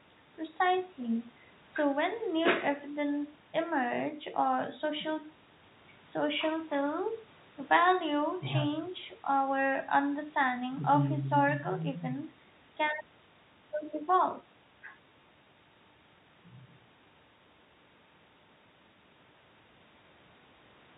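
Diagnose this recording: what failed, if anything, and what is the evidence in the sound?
Nothing here has failed; the speech comes through as you'd expect from a G.711 telephone line, with the top end capped below 4 kHz and only a faint quantisation hiss riding along under it.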